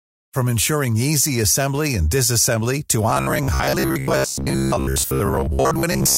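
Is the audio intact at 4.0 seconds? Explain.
No, robotic sound from repeated short buffers runs from 3.10 to 6.18 s, right after "assembly and disassembly to". Most of it is likely a repeated fragment of about 15 ms, giving a rigid, metallic buzz near 66.8 Hz.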